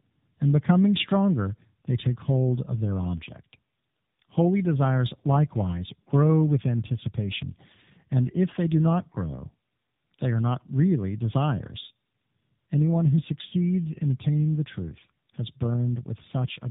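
From start to finish the speech sounds rough, muffled and warbly, with nothing above about 3.8 kHz. This is tandem speech coding. The signal passed through two AMR-NB speech coders in a row, with a G.711 mu-law link between them. At each border it was decoded and coded again, so the second coder had to work on audio already degraded by the first. The roughness fits a lower rate of around 7.95 kbit/s on the final stage.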